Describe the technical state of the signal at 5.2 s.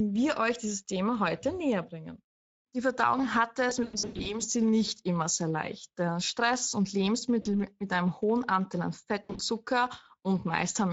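At 5.2 s, as everywhere in the clip, there's plainly audible Speex codec damage. The CELP coder's short on excitation bits, which fits roughly 16.8 kbps, so the speech sounds hoarse and noisy.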